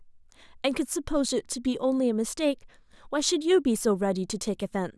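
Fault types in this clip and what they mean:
No technical faults audible in this speech recording.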